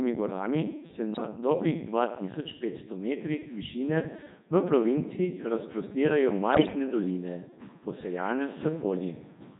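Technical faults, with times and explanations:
Throughout: Codec 2 vocoder. The speech passes through Codec 2 at 3.2 kbit/s, heavily damaged. Only pitch, voicing, energy and a spectral envelope survive. The decoder rebuilds the voice from sine waves. So it sounds robotic and buzzy, and the original waveform is gone.
1.14 to 1.22 s and 6.52 to 6.75 s: bit errors on digital voice radio. The first burst is brief. The second lasts about a quarter second. Corrupted bits reach the low-rate vocoder, and each one sets a whole frame's pitch, level or spectrum. The voice jumps and warbles into synthetic gibberish.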